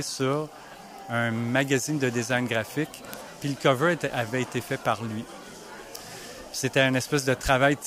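Steady, sharp word clock ticks run from 0.21 to 7.85 s, roughly every 0.15 s, from an unlocked digital link; each shows as a thin vertical spectrogram line and a brief waveform spike.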